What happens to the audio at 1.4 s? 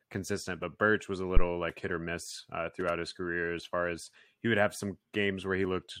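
Right after "was a", at 1.37 s, there's a phantom power thump running to about 1.47 s, just before "like hit or miss". Someone switched the supply on a live input, and that DC step kicked straight through the coupling capacitors. You hear it as a deep, low thud peaking around -8 dBFS. It dies away quickly, in about 22 ms, so it's a short punch of low end rather than a long boom.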